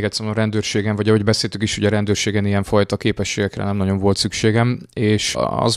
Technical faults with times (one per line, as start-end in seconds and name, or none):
none